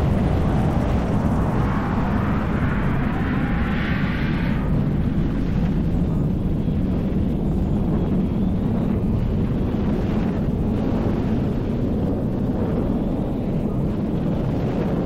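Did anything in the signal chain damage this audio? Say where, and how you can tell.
Yes: compressed frames skipped in the codec, at 5.55, 8.90, 10.45 and 13.26 s. Each time the audio jumps ahead by the missing frames: about one 23.2 ms frame (roughly 20 ms) at the first three, and about two frames (roughly 50 ms) at 13.26 s.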